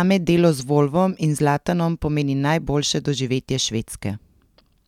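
There are no technical faults to describe at any point in this speech.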